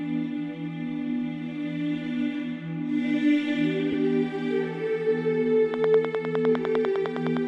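The audio has two technical faults. At 3.92 to 3.94 s there are lost LE Audio frames. About 15 ms of signal is missing, which fits two lost frames. The LC3 decoder concealed the gap by replaying the last spectrum with random signs. This gives a brief, noisy smear. From 5.74 to 7.38 s a train of clicks runs over the sound. The clicks come at a regular pace of about 10 per second, around fifteen in all. They peak roughly 15 dB above the signal. The likely cause is interference from nearby equipment or a faulty connection or power supply.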